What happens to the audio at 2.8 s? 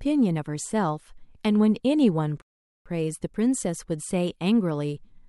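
At 2.8 s the speech is frozen in a rebuffering stall that runs from 2.42 s to 2.86 s. The player exhausted its downloaded audio and paused until more data arrived, so the sound drops to silence and then picks up exactly where it left off, adding about 0.44 s without losing any speech. On a waveform this shows as a flat line across that span, and on a spectrogram as a blank vertical band with matching content on both sides.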